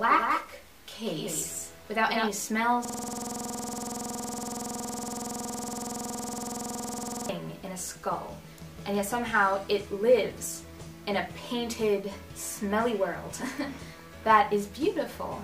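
From the very start until 2.28 s the audio carries a doubled audio track: a second full-band copy trails the original by roughly 200 ms at about 5 dB lower level, with no reverberant tail or tonal colouring, and it stops abruptly at 2.28 s. That fixed, clean offset most likely comes from the same signal being captured again through a slower path, or from an edit leaving two misaligned copies summed together. From 2.85 s to 7.29 s a system hang loop takes over. A single 46.44 ms slice of audio repeats exactly, close to a hundred times, producing a coarse buzz at 21.5 Hz in place of the programme. This is the sound hardware endlessly replaying its ring buffer while the host or driver is frozen, and the loop length fits a 2048-sample buffer.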